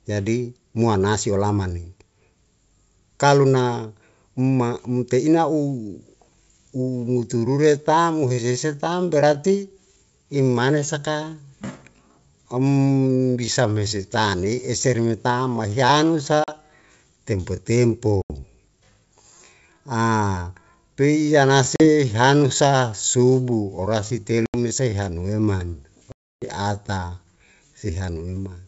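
Speech carried over a wideband call, with the clear band up to about 7 kHz that fits G.722 at 64 kbit/s, has two faults. From 5.74 s, where "loli mesa" follows, to the end, the audio is a time-stretched section running at 0.71 times normal speed. The pace drops abruptly while pitch stays put, and the slowed delivery drags. That is likely software lengthening the audio to fit a duration by repeating short pieces rather than resampling. Within that stretch there is packet loss on an ADPCM call at 16.44 s (40 ms), 18.22 s (80 ms), 21.76 s (40 ms), 24.46 s (80 ms) and 26.12 s (300 ms). Each is a hard-edged silent hole, and the speech then comes back slightly distorted. This happens because the decoder's adaptive predictor and step size have drifted from the sender's and need some tens of milliseconds to realign.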